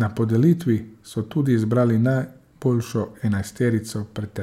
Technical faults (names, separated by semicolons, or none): none